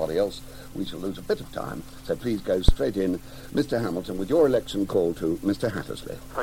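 At 0.87 s there's a DC step: the waveform's zero line suddenly jumps by about -34 dBFS, the kind of shift you get when a converter recalibrates or an offset input gets switched in. You hear it as a low thump or click, and the audio carries straight on over it. The offset then bleeds away slowly, as if a 2 Hz high-pass were pulling it back to centre. The same step turns up again at 4.18 s, with the same size and the same slow settle.

Between those, from 2.69 to 2.76 s, there's a phantom power thump. A supply got switched on a live input, and that jolt came through the coupling capacitors as a deep, short thud. It's quick, dying away with a decay of roughly 17 ms, so it sounds more like a blunt knock than the longer boom you sometimes get.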